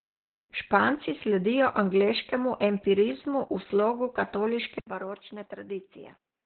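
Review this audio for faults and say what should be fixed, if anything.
Opus voice compression runs through the whole clip: the speech sounds muffled, hoarse and slightly robotic. On a spectrogram, energy stops sharply at about 4.2 kHz with coarse, smeared harmonics below. This points to narrowband SILK coding at roughly 8 kbps in 20 ms frames, where the excitation is coded crudely. Encode at a higher bitrate so Opus keeps wideband SILK or hybrid mode.

Input switched to a poorer device: at 4.79 s the sound drops out for 80 ms, then returns about 10 dB quieter and duller until the end at 6.45 s. The waveform shows a short gap followed by a smaller envelope. The spectrogram ceiling falls to 3.8 kHz, with a faint new noise floor well below the speech. The likely cause is the system changing its input mid-recording. Lock the recording input device so the operating system cannot switch it automatically during capture.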